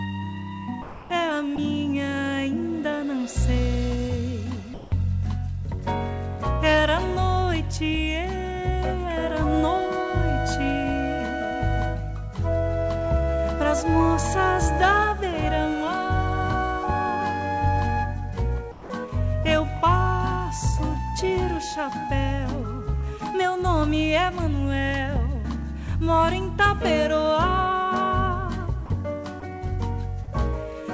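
Audio carried over a call path that fits 64 kbps G.722, with nothing above 8 kHz, breaks in three ways. At 0.82–1.10 s, 1.56 s, 18.72–18.90 s, 28.86–28.90 s and 29.40 s, the sound abruptly gives way to steady hiss. This is likely sound dropped by the voice detector, which mistook it for background and sent comfort noise instead. From 4.74 to 4.92 s, the real background, about 19 dB below the loud parts, flattens into featureless noise about 1 dB quieter: likely comfort noise in place of the background. At 30.24–30.29 s, a brief smear marks a short concealed packet loss, where about 40 ms went missing and was filled by extending the preceding sound.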